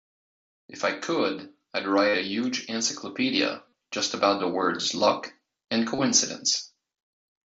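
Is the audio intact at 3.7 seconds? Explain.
No. From 3.69 to 3.72 s there is concealed Bluetooth headset packet loss. About 37.5 ms of headset audio never arrived. The receiver filled the gap by repeating the closest-matching recent stretch of waveform. This gives a brief buzzy, held tone and a slight warble as real sound resumes.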